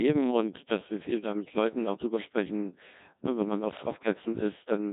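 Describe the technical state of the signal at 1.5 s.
At 1.5 s the speech is running through a Codec 2 vocoder, as it does for the whole clip. The waveform is not preserved. Only pitch, voicing, energy and a coarse spectral envelope survive, and the decoder rebuilds the voice from sine waves. Damage is heavy: the voice sounds robotic and buzzy. That degree of smearing fits a low setting near 1.6 kbit/s.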